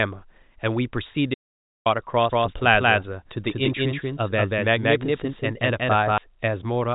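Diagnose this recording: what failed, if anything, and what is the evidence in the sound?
At the network stage, one packet was lost at 1.12 to 1.14 s, and the receiver concealed it with packet loss and pitch repetition, replaying the last pitch period for 20 ms. It sounds like a brief buzzy hold. A spectrogram shows frozen, perfectly regular harmonics there.

An audio dropout to silence runs from 1.34 to 1.86 s. For about half a second the sound stops abruptly and then resumes mid-flow. The waveform is a flat line of silence with no room tone, which points to a likely input or link failure upstream of the encoder.

From 2.32 to 6.18 s there is a doubled audio track. A second full-band copy, roughly as loud as the original, trails it by about 200 ms, likely from a parallel capture path. It has no reverberant decay, so it reads as a crisp echo. On a waveform each onset repeats identically, and the spectrogram shows ghost copies of every event shifted right. 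The copy switches in and out abruptly at both ends. Band-limiting to 4 kHz from the G.711 telephone coding is present throughout, with at most faint codec damage.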